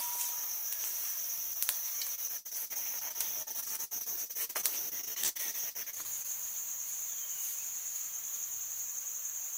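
At 1.53 to 1.57 s, short concealed packet loss: about 20 ms never arrived and was patched by extending the preceding sound, leaving one isolated smear rather than ongoing choppiness.

From 2.15 to 6.26 s, repeated packet loss gives a robotic sound: dozens of holes up to 79 ms are patched in quick succession, so over a quarter of the stretch is synthetic.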